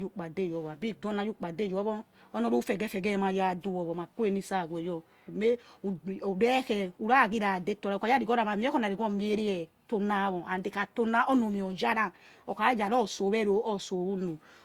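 From start to finish the speech has a swirly, smeared, hollow quality and softened consonant attacks, likely generation loss: repeated Opus decoding and re-encoding, around five passes, each requantising on a shifted frame grid so noise accumulates, beyond what a single 64 kbit/s encode would produce.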